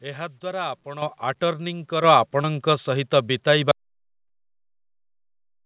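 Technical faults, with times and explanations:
1.02 and 2.04 s, microphone volume stepped up: input gain jumps about 9 dB, then about 6 dB, in single steps, lifting voice and background together; the waveform envelope widens abruptly at each point.
2.42–2.46 s and 4.28–4.31 s, short concealed packet loss: about 20 ms never arrived and was filled by extrapolating prior sound, giving a brief smear; the spectrogram shows a smoothed, blurred patch.
3.71 s to end, audio dropout to silence: sound cuts out mid-flow into silence, likely from a lost input or link. The waveform is flat, and the spectrogram above the 4 kHz G.711 band limit is empty.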